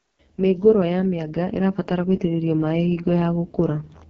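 Throughout, the speech carries heavy AMR wideband (HD Voice) codec damage. Nothing is heard above 7.3 kHz. The voice comes out rough and raspy. That harshness fits the codec's lowest rate, around 6.6 kbit/s, where little detail survives.

From 0.44 s to 3.92 s, automatic gain is rising. The gain control judged the input too quiet and pushed its level up slowly. The voice and background swell together by about 8 dB, a steady climb over several seconds.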